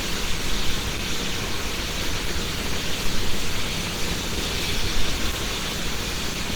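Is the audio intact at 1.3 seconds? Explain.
No. Opus compression affects 1.3 s and the whole clip, likely from an encoder in its hybrid speech mode at a low rate fitting about 16 kbps. Starved bands are filled with folded or noise content, so the sound is plainly muffled, hoarse and grainy, with nothing above 20.1 kHz.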